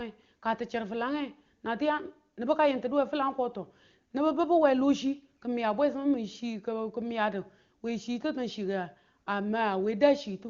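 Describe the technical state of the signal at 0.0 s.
At 0.0 s the speech is intact, passing through the AMR wideband (HD Voice) codec at its top rate of 23.85 kbit/s with no fault present.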